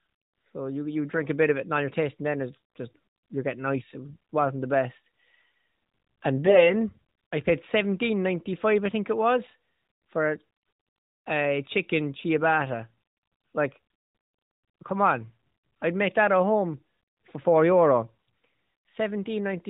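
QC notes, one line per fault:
4.09 to 4.16 s, AMR bit errors, just before "wasn't the best": a brief hoarse, scratchy patch where the pitch and level hold but the texture turns rough. Some of the less protected bits in the mobile codec's frames arrived flipped, on the order of a few percent, so the excitation pulses landed in the wrong places.
6.46 to 6.64 s, AMR bit errors: a longer, gargly stretch from a heavier error rate, around one bit in twenty. The finer pitch, gain and spectral values decode wrongly, smearing the sound while its overall contour survives.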